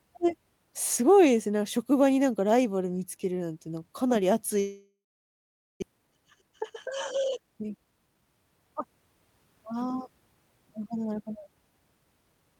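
A speech clip in which the sound stops abruptly at 4.59 s. The last sound is stretched into a buzzy tail that fades within a few tenths of a second, leaving about 820 ms of near-silence until audio returns at 5.84 s. Roughly a second of material never comes back. This is most likely a long network dropout, with the receiver concealing the gap before giving up. On a spectrogram it appears as smeared, repeating harmonics fading into an empty band. The waveform shows a decaying envelope, then a flat line, then an abrupt restart. After it, the stream sits around 200 ms further behind, and the receiver works that backlog off with two jitter buffer speed-ups. From 5.92 to 6.63 s the speech runs at about 111% speed, and from 7.16 to 8.22 s at about 112%. The pitch stays the same, but delivery sounds hurried as pitch-period-sized slices are cut out, removing roughly 100 ms and 150 ms of audio. 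On a spectrogram the harmonics hold their spacing while syllables compress in time. The waveform shows whole voiced cycles removed, with the remaining cycles keeping their length.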